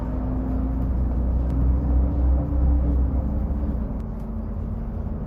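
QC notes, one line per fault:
1.50–4.00 s, doubled audio track: a second full-band copy of the sound runs roughly 0.7 s behind, some 5 dB quieter. It has no decay or room colour and cuts in and out abruptly. Likely a slower capture path or an out-of-step edit.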